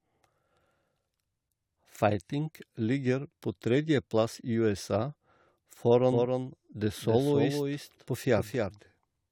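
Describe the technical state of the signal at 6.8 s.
At 6.8 s the speech carries a doubled audio track, present from 6.12 s to the end of the clip. A second full-band copy trails the original by roughly 300 ms at around 5 dB lower, most likely from the signal being captured again through a slower path. Unlike a room echo or reverb, the copy has no decay or added room colour and does not die away; it cuts in abruptly at 6.12 s.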